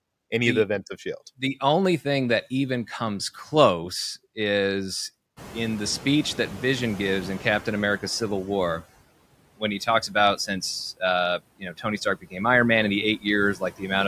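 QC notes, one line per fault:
Throughout: noise suppressor artifacts. The suppressor pulls down the bands it judges to be steady noise by about 20 dB, frame by frame, so the leftover background dips between words and surges beneath them.
5.36–8.80 s: noise suppressor catching up. The room noise jumps by about 19 dB near 5.5 s, and the suppressor's noise estimate trails it, so the louder background first comes through with only about 12 dB of reduction, then sinks as the estimate adapts over roughly 3.4 s.
9.79–10.15 s, 11.59–12.38 s, 13.55–13.83 s: speech cut by the noise suppressor. The suppressor mistakes parts of the speech for noise and turns them down with the background, by up to about 10, 20 and 16 dB respectively. This leaves a brief swallowed patch in the first, a longer stretch of nearly half a second faded in the second, and a short faint section in the third.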